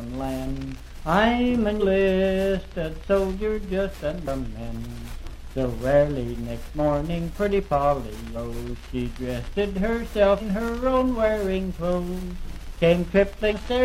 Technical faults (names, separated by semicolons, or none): compressed frames skipped